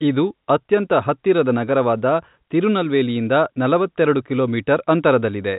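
Nothing stood out on listening to this telephone-band speech, whose G.711 coding leaves nothing above about 3.8 kHz.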